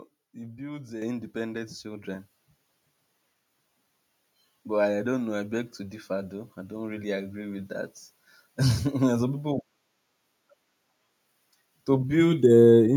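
At 1.02 s, just after "it builds uh", the microphone volume steps up by about 7 dB. The call software judged the input too quiet and raised the device gain at once. Voice and background jump louder together. At 2.04 s it steps up again, by about 4 dB.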